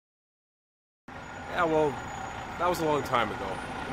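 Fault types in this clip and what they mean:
Cut-off start: The clip holds digital silence from the beginning until about 1.08 s, then the sound arrives abruptly at full level, already mid-event, with no attack or fade-in leading into it. The onset is missing because capture or playback began late. Whatever was sounding before 1.08 s was never recorded, so the audio jumps straight from nothing into the middle of a sound rather than building up naturally.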